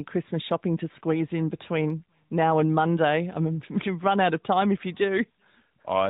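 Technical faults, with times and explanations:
The speech carries no audible technical faults, and its narrow, telephone-like bandwidth comes from the mobile speech coding path rather than from any defect.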